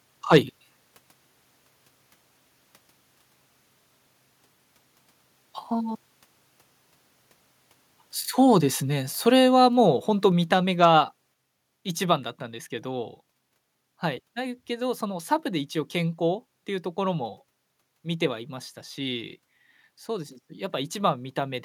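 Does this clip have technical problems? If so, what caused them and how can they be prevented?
Yes. Microphone overload is audible at 0.32 to 0.37 s, where peaks are cut flat by about 4 dB and a fair share of samples are clipped, and briefly at 10.83 to 10.85 s, about 1 dB over. The likely cause is input gain set too high. Lowering the microphone's input gain or adding distance from the mouth prevents it.

Microphone volume stepped down is heard as sudden level drops at 9.3 s and 10.32 s (about 3 dB each) and 11.34 s (about 4 dB). The likely cause is the call software's automatic gain control cutting input volume after detecting excessive level. Setting a correct fixed gain and disabling automatic microphone adjustment prevents it.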